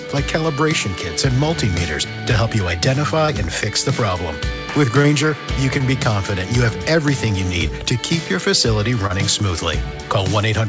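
At 3.26, 5.02, 5.78, 7.68 and 9.07 s there is short concealed packet loss: each time about 20 ms of audio failed to arrive in time, and the receiver extended the preceding sound to cover the gap before crossfading back into the real signal, the patches lasting roughly 12 to 27 ms. Each is heard as a brief smear or wobble. The call path's band limit, with nothing above 8 kHz, fits G.722 at 64 kbps.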